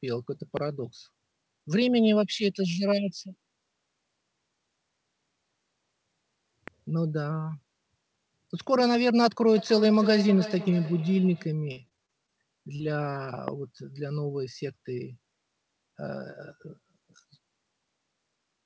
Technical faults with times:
0.57-0.59 loud pop
6.68-6.70 loud pop
9.57-11.59 feedback echo between two devices
11.72-12.30 repeated packet loss (robotic sound)
12.76-12.81 short concealed packet loss
13.48-13.50 loud pop

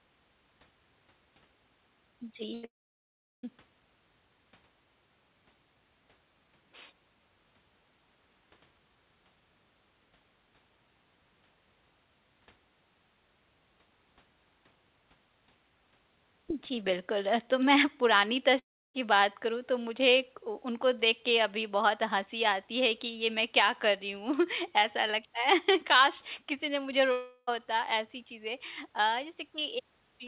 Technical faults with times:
2.54-2.65 burst of packet loss
2.65-3.45 long network dropout
18.59-18.96 long network dropout
27.12-27.49 long network dropout

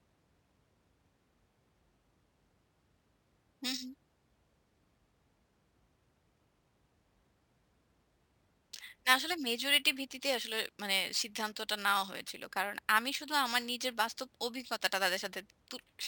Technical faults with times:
0.00-16.07 imaging from sample-and-hold upsampling

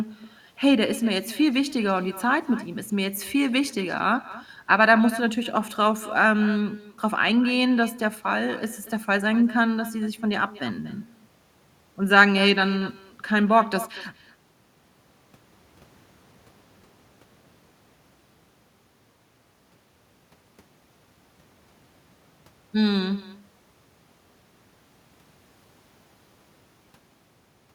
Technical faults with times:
0.00-27.74 echo with no canceller

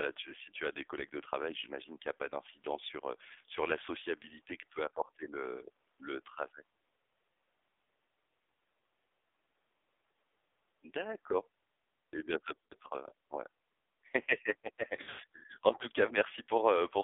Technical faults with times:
0.00-17.04 AMR narrowband mobile codec
12.54-12.73 lost AMR speech frames
15.02-15.20 lost AMR speech frames

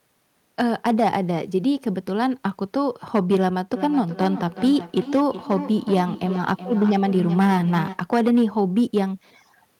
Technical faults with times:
0.00-9.79 hard clipping
3.75-8.07 feedback echo between two devices

